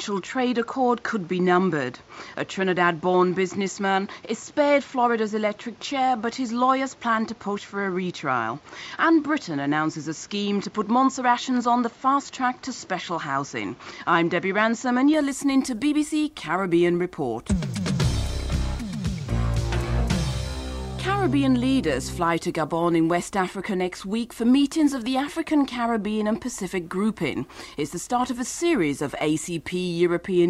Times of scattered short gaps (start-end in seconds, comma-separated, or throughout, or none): none